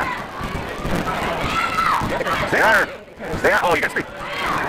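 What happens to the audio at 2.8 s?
At 2.8 s you're in the middle of a block size mismatch (truncated) that runs the whole clip. Block ends get dropped, which fits a 256-sample read, so a 172 Hz buzz rides along while everything plays about 1.88 times too fast at roughly normal pitch.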